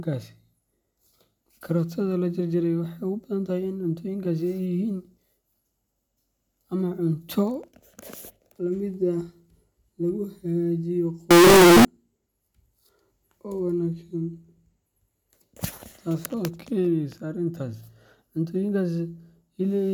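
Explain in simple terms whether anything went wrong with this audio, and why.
Float read as integer, from 11.31 to 11.85 seconds: for about half a second the speech suddenly turns into a very loud, harsh buzz, and the background hiss jumps up to match the voice, though you can still follow its rise and fall in pitch. The likely cause is that samples stored as 32-bit floating-point numbers were read as 32-bit integers, so the number's internal layout, not the actual sound, decided how loud each sample came out.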